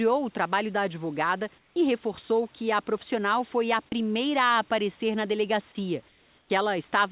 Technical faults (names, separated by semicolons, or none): comfort noise in place of the background; sound dropped by the voice detector